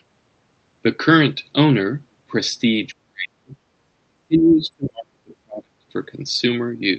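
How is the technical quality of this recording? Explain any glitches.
The recording has two clear dropouts in the speech, from 3.05 to 3.63 s and from 4.02 to 5.75 s. This is likely speech suppressed in double talk. The echo canceller apparently could not separate the talker from the far-end echo playing at the same time and pushed the voice down by roughly 40 dB, so it fades or breaks off in pieces. The audio also carries the band-limited sound of a call codec, with content stopping around 8 kHz.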